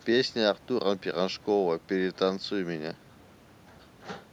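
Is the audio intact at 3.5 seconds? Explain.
Yes, at 3.5 seconds the speech is intact, with no audible dropout, click, distortion or other fault at that moment.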